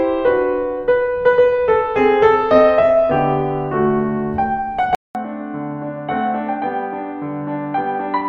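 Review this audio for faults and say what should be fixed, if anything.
At 4.95 s the music drops out for about 200 ms, then returns duller and boxier, roughly 10 dB quieter, with nothing above 4.1 kHz and a faint new background hiss well beneath it, lasting to the end of the clip. This is likely an input switched to a poorer device: the recording chain jumped mid-take to a lower-grade microphone or headset profile with a narrower band, its own gain and its own noise. Locking the input device before recording and disabling automatic device switching would prevent it.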